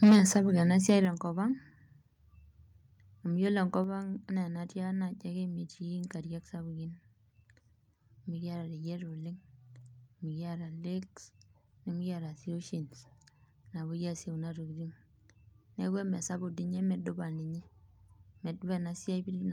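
Microphone overload from 0.02 to 0.16 s at the start of this speech clip: the peaks push about 7 dB past the converter's ceiling and roughly half the samples are flattened, giving a harsh, crackling edge, likely because the input volume was set too high. Microphone volume stepped down at 0.04 s, 1.05 s and 3.84 s (just after "amu yiolo"), with voice and background dropping abruptly by about 2 dB, 7 dB and 3 dB, likely because the call software lowered the device's input gain in response to the clipping.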